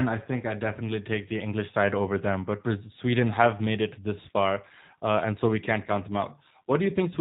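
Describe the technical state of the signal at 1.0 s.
At 1.0 s the speech is carrying G.729 codec damage, present across the whole clip rather than at that moment alone. Nothing above 4 kHz survives, and the voice is rebuilt from a vocal tract filter, a pitch predictor and a few pulses per 5 ms subframe, which fits an 8 kbit/s G.729A stream. The result is plainly audible: band-limited, slightly rough and synthetic, with a buzzy, modelled quality in place of natural detail.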